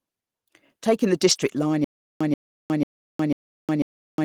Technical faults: lost packet rebuilt from error correction; stutter with silent gaps

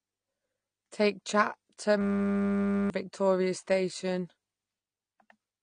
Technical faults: AAC compression; system hang loop

